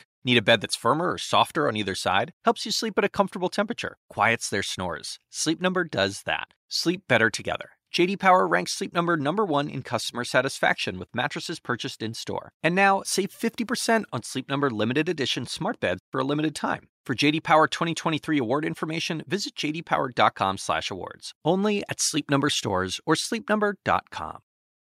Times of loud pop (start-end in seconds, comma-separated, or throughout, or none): none